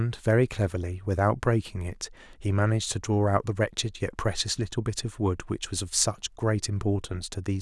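A short speech recording with no technical faults to report. Nothing in it calls for a time, a cause or a fix.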